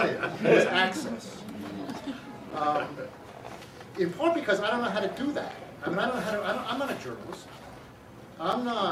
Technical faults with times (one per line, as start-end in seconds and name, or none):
2.51 gap between chunks
5.51 gap between chunks
8.52 gap between chunks